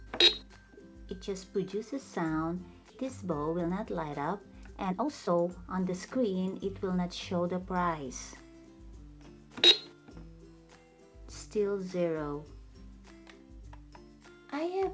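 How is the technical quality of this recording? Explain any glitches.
Two timing faults affect the recording, both on a call path whose content stops at 8 kHz, consistent with a wideband codec such as G.722.

At 2.9 s there is a skip ahead. About a second of audio was discarded, likely by the jitter buffer dropping a backlog when it overflowed. Playback jumps forward with no filled gap, so the material on either side is butted together abruptly.

From 3.02 s to 7.34 s a jitter buffer speed-up runs at about 113% of normal rate. The receiver repeatedly trimmed short pitch-period segments to reduce excess buffered delay, roughly half a second in total. The sound keeps its pitch but plays noticeably hurried.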